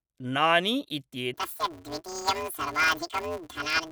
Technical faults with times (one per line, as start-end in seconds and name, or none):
1.34-3.91 planar audio read as interleaved